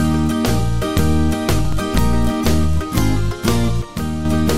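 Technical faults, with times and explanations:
1.53–1.72 s, processor overload crackle: the processor misses several buffer deadlines in a row, each skipping roughly 10 ms of audio, leaving hard-edged gaps heard as gritty crackle.
3.82–4.25 s, one channel drops out: the level abruptly falls by about 6 dB and then returns, likely because one stereo channel was lost and the mono sum lost half its content.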